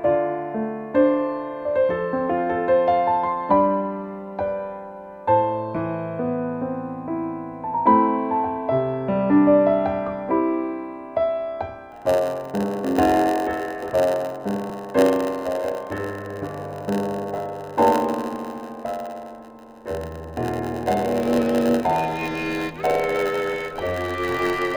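From 11.91 s to the end, the audio has a block size mismatch (padded). A steady buzz at 91.9 Hz appears. One stage writes shorter blocks than the next reads, and zeros fill each gap. The sound runs at 0.919 of normal speed. There are also small jumps forward at 13.90 s, 14.70 s and 17.38 s. Roughly 20 ms, 10 ms and 40 ms of sound go missing, with no silence in between. These are likely dropped buffers (overrun), where samples were overwritten before being read.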